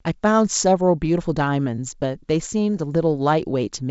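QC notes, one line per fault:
No faults found.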